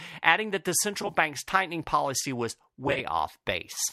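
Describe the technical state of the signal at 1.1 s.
At 1.1 s the signal is inside a stretch of AAC frame loss with concealment running from about 1.02 to 1.14 s, between "adding that the" and "tightening policy was". Roughly 60 ms of audio is missing within a span of about 100 ms, in short gaps of at most around 20 ms. The decoder, likely low-delay AAC, patches each gap from the last good spectrum, so the speech briefly turns smeared and noisy rather than dropping out.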